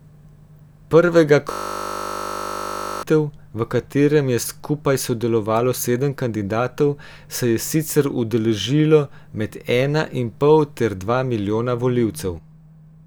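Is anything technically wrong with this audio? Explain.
Yes. From 1.52 to 3.03 s, a system hang loop replays one 20 ms slice of the speech over and over, producing a steady 50 Hz buzz before "v katerem je skupaj". Unlike a dropout's silence, identical audio repeats while the frozen driver's buffer keeps cycling.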